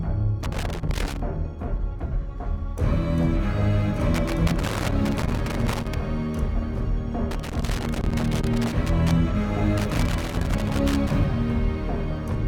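Loose connector crackle bursts in at 0.43–1.20 s, 4.14–5.94 s, 7.31–9.11 s and 9.77–11.13 s: a worn contact repeatedly breaking and remaking, chopping the signal with scratchy crackle. Unlike evenly spaced digital clicks, these bursts are ragged and clustered, as if tracking movement.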